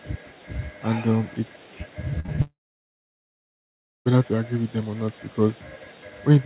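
At 2.20, 2.26 and 2.36 s, short concealed packet loss leaves brief smears and a small wobble, each covering roughly 20 to 40 ms. The receiver bridged each missing slice by extending the preceding sound. On a spectrogram, the last sound runs on briefly and then blurs back into the band-limited trace, which stops at 4 kHz.

From 2.42 s to 4.07 s the sound carries on as a fading buzz or hiss for a moment, then drops to about 1.5 s of silence, visible as a flat waveform and an empty spectrogram. The audio returns at 4.07 s with that stretch missing, which points to a likely long network dropout.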